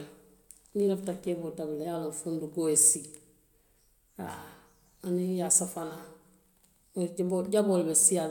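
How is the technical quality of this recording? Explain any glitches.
No technical faults can be heard in the recording. There are no glitches to explain.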